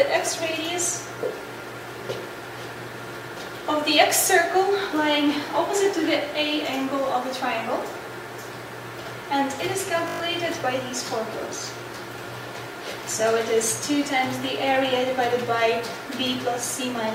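At 10.08 s the audio locks into a system hang loop until 10.2 s: the system stalled while the sound hardware kept replaying the same 20 ms stretch of its ring buffer, six times over. That short loop sounds like a brief buzz at 50 Hz rather than a stutter, and about a tenth of a second of sound is lost. Unlike a dropout's silence or a glitch's smeared repair, the repeats are identical copies, so the buzz has a rigid, mechanical evenness.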